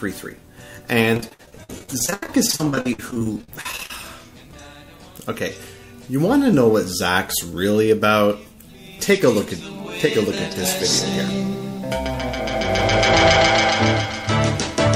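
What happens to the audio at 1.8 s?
At 1.8 s the sound is inside a stretch of repeated packet loss (robotic sound), from 1.14 to 3.91 s. Dozens of short dropouts, the longest 83 ms, are patched by stretching the last sound. About a third is filled this way, giving choppy audio with pieces missing.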